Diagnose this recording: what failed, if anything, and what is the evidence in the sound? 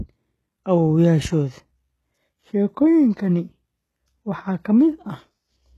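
The failure sits at the codec stage, and the likely cause is HE-AAC compression. The damage is plainly audible across the whole speech clip. The top end stops dead at about 12.3 kHz. Above the coded low band, the treble sounds synthetic. S sounds come out gritty and metallic. Spectral band replication copies lower bands upward under a coarse envelope, so the harmonics there do not line up with the real ones. The artefact level fits a very low bitrate, around 16 kbps.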